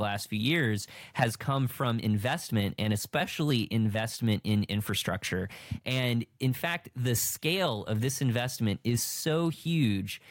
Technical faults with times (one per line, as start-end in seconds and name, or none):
4.13-4.22 loose connector crackle